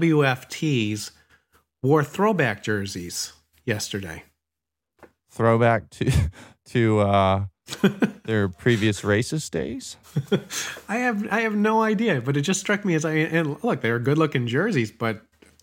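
At 8.31 s, just before "previous racist days", a bit error spike gives one sharp tick. It peaks at about -27 dBFS. A second one at 12.21 s, between "I have no idea" and "but it just struck", peaks at about -33 dBFS. Each lasts three samples. A flipped bit throws the value off by a power of two, then it snaps back. The tick is broadband and unrelated to the speech.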